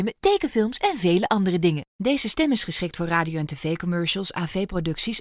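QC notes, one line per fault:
No technical faults are audible anywhere in the signal.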